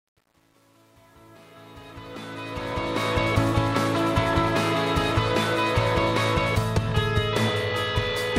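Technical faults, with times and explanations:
0.0–3.17 s: truncation distortion on a fade. The fade-in rises until 3.17 s. Its quiet start sounds gritty, worst from 0.0 to 2.41 s. The gain stage kept too few bits and added no dither, which fits about 9-bit resolution. Near the smallest step, the waveform collapses into a few coarse square steps. That adds harsh distortion until the level climbs clear of it.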